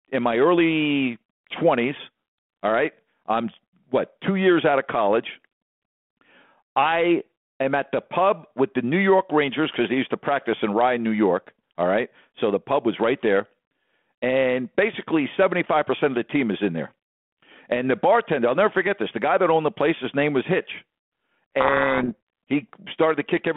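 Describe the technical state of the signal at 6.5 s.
At 6.5 s the audio is intact, with the speech passing through the G.726 ADPCM telephone path at 32 kbit/s in its normal narrow 150 Hz to 3.4 kHz band and no fault present at that moment.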